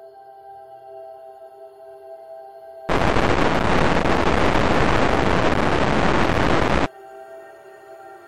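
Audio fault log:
No fault found.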